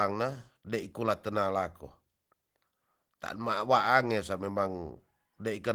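No technical faults can be heard in the speech.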